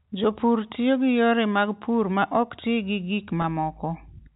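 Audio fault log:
3.42 s, packet loss with pitch repetition: just after "ok ti gi gik", about 20 ms of sound goes missing, a gap that fits a single lost packet. The receiver bridges it by repeating the last pitch period, so the sound briefly holds with a slight buzz. On the waveform, one cycle repeats as it fades. On the spectrogram, the harmonics run perfectly flat across that narrow strip, all below the 4 kHz ceiling of the G.711 telephone band.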